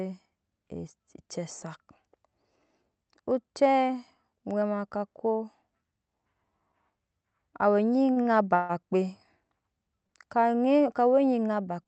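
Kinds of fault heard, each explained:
repeated stalls (stutter): Between 7.99 and 8.72 s the speech halts four times, up to 141 ms, held and faded, so it drags rather than losing sound.
short stall from a late packet: At 10.07 s one sound is stretched for 21 ms while a late packet arrives, a single brief hold rather than a repeating stutter.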